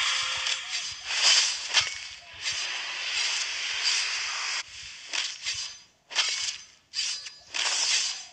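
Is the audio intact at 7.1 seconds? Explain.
Yes, at 7.1 seconds the audio is intact, with nothing interrupting or disturbing the sound at that point.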